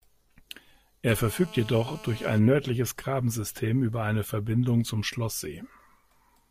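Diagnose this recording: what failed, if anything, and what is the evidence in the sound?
The failure is in the analogue wiring: there's GSM phone buzz from 1.09 to 2.39 s, a hard, raspy drone at about 217 Hz with a thick stack of harmonics, sitting about 21 dB below the speech and ignoring it completely. It holds steady throughout, which fits a phone on an active call nearby. Its radio pulses get rectified somewhere in the mic or cable path, turning the transmit burst rate into audible buzz.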